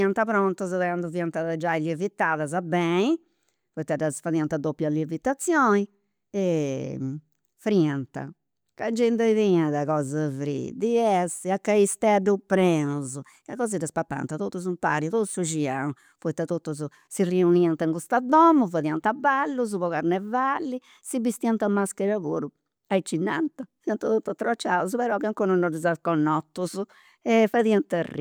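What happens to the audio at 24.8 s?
Nothing goes wrong at 24.8 s; the speech continues intact through that moment.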